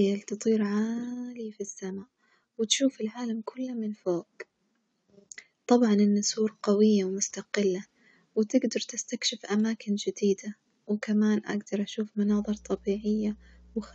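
A ground loop or a nearby transformer is letting the 60 Hz power line leak into the signal path of this speech clip, producing mains hum from 12.30 s to the end, starting just after "جديدة وكمان أجدر أشوف". It is heard as a steady low drone at 60 Hz, sitting roughly 25 dB below the speech, through the final 1.6 seconds.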